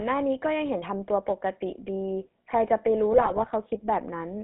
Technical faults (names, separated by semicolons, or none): GSM full-rate codec; GSM bit errors